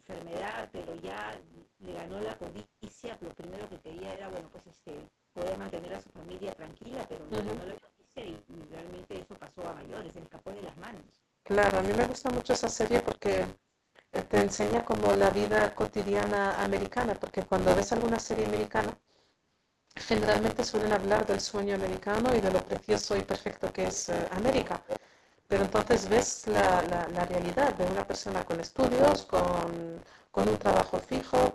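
Buffer tearing runs through the whole clip: the writer and reader of the playback ring buffer have slipped, so roughly a fifth of each period carries audio about 30 ms stale, with hard joins on both sides. The result is a steady 100 Hz robotic buzz riding on the speech, which fits a 10 ms period.

Speech suppressed in double talk appears from 7.71 to 8.08 s, where the voice drops by about 30 dB, and again briefly from 17.29 to 17.33 s with a shallower dip of about 15 dB. This is likely the echo canceller mistaking overlapping far-end talk for echo and attenuating everything.

Echo leak follows at 22.75 to 22.8 s, 24.59 to 24.69 s and 24.88 to 25.07 s. A delayed copy of the speech returns 404 to 407 ms late, at about 10, 20 and 5 dB below the direct voice respectively. It is heard as short repeats, likely residual loudspeaker pickup that the far end's canceller failed to remove.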